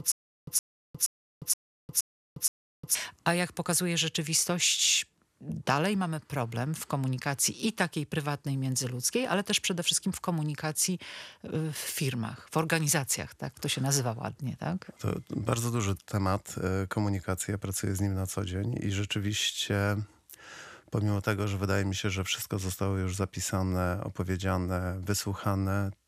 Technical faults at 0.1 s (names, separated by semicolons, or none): stutter with silent gaps